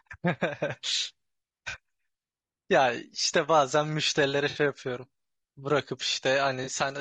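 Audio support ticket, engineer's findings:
Grainy, rough speech throughout, with noise between the harmonics and a dull, synthetic top band. Likely low-delay AAC compression (AAC-ELD). Short frames resolve pitch harmonics poorly. Damage plainly audible, consistent with a low bitrate around 32 kbps.

AAC frame loss with concealment at 1.69–1.75 s, 4.49–4.59 s and 6.63–6.69 s. Smeared, noisy patches of 40 ms, 60 ms and 40 ms. Decoder rebuilds missing audio from the last good spectrum. Lengths fit two, three and two lost frames.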